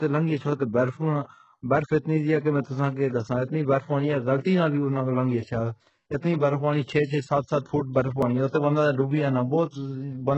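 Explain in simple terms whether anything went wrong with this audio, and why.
The whole clip of speech sounds gritty, with lispy s sounds. This is likely HE-AAC compression squeezed very hard, faking the treble.

At 8.22 s and 9.11 s the sound jumps ahead by a tiny slice. Each is likely a dropped buffer (overrun), losing roughly a hundredth and two hundredths of a second.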